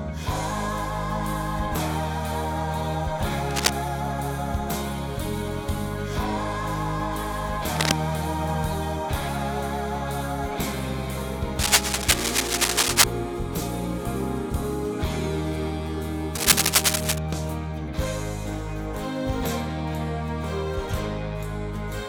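Bursts of scratchy, rustling noise break over the sound from 3.50 to 3.70 s, from 7.75 to 7.92 s, from 11.59 to 13.04 s and from 16.35 to 17.18 s, each sitting a little above the level of the sound itself. These are cable scratch noise, likely from a worn cable, connector or control being moved so its contact resistance jumps about, spraying ragged noise into the signal while the contact is disturbed.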